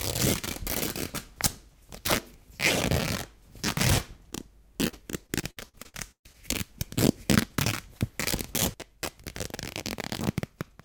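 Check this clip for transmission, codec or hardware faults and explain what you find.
There is one transmission fault: repeated packet loss (robotic sound) from 4.87 to 6.36 s. Around ten short holes, the longest about 132 ms, are each patched by extending the preceding sound, which leaves a choppy texture with pieces missing. Unlike a single dropout, the holes keep recurring throughout the stretch.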